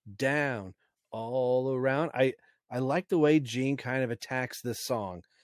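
No technical faults are audible.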